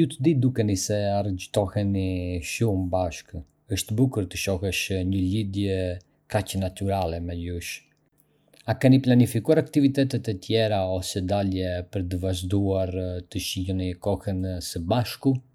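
No technical faults are audible.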